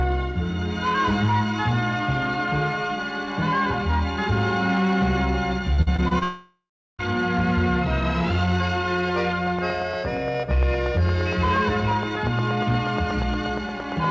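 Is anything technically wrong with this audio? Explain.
Yes, three faults stand out, all heard through a call path whose band stops at 8 kHz, which fits a G.722 codec at 64 kbps.

From 5.74 to 6.23 s there is repeated packet loss with a robotic sound. Five short holes, the longest about 46 ms, are each patched by stretching the preceding audio, so roughly a third of that half-second is synthetic. Unlike a single dropout, the sound keeps returning between the short gaps, which makes it choppy and robotic.

From 6.23 to 7.01 s comes a long network dropout, likely from a connection stall. The receiver extends the last sound as a fading buzz or hiss, then about 0.37 s of near-silence follows, and the audio resumes with that part missing. That continuous gap of most of a second separates it from the brief, scattered losses before it.

From 9.47 s to the end runs a train of clicks, at about 8.5 per second and evenly spaced, peaking around 10 dB above the surrounding sound. 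They are likely interference or a faulty connection. Their closely matching shape and steady rhythm through pauses set them apart from codec crackle or random pops.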